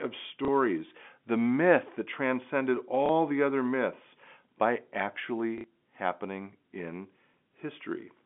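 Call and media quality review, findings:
Packet loss with last packet repeated: receiver concealment replayed the previous packet at 0.45 s (30 ms), 3.06 s (30 ms) and 5.58 s (60 ms, pointing to two consecutive 30 ms packets). The single repeats at 0.45 s and 3.06 s are small blips, and the 5.58 s run briefly stutters robotically. The 5.58 s gap buzzes at about 33 Hz. The G.711 telephone band stays intact through each gap.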